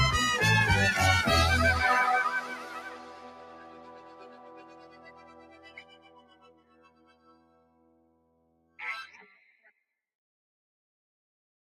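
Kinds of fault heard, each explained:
Noise suppressor applied to music or sounds: A suppressor built for speech runs through the whole clip. It mistakes sustained tones, ambience and decays for noise. Onsets come through, but held sound and tails sink by about 15 dB, so the level pumps and thins.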